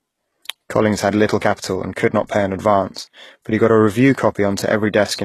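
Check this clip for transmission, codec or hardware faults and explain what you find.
One codec fault runs through the whole clip.

Throughout, the sound is consistent with heavy HE-AAC compression, likely at a very low bitrate around 16 kbps. Only the lower band is coded directly. The treble is synthesised by copying lower bands upward and shaping them with a coarse envelope, and nothing survives above 12.3 kHz. The copied partials don't line up with the true harmonics, so sibilants in the speech sound gritty, lispy and metallic, with an artificial top end.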